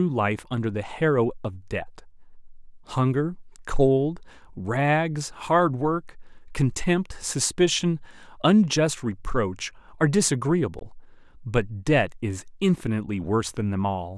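At about 10.79 s there's a block of digital silence, roughly 18 ms where the speech drops out and then comes back. Nothing fades in or out, so the waveform jumps to nothing and back again. At roughly 18 ms the gap is just longer than the ones heard only as a tick, a cutout of the kind you get when the audio buffer wasn't filled in time.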